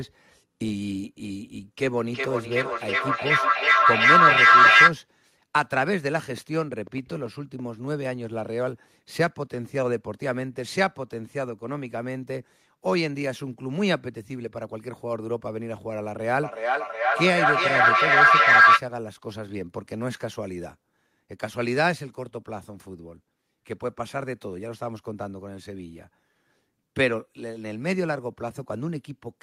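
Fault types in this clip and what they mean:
Feedback echo between two devices: Two devices on the same call share a room, so one loudspeaker replays what the other microphone sent, and that microphone captures it again. Each echo canceller removes only its own playback. From 1.98 to 4.96 s and 16.42 to 18.85 s, the sound returns roughly every 0.4 s and builds up, peaking about 12 dB and about 11 dB above the speech. A spectrogram shows stacked, regularly spaced copies of each syllable, narrowing into ringing bands.
Train of clicks: Between 6.31 and 7.60 s, around ten similar sharp clicks tick over the speech, including in the gaps, at about 6.2 per second but unevenly spaced. Peaks sit around 5 dB above the signal. The likely cause is interference from nearby equipment or a faulty connection or power supply injecting pulses. On the waveform they appear as thin isolated spikes. On a spectrogram they appear as narrow vertical broadband lines at irregular intervals.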